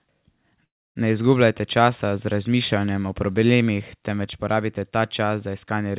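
A call audio freeze in this speech runs from 0.64 to 0.97 s. Packets were likely held up and the jitter buffer ran dry, so sound stops for about 0.3 s. It then resumes where it left off, with nothing lost and the rest delayed. The narrowband call path leaves nothing above 4 kHz.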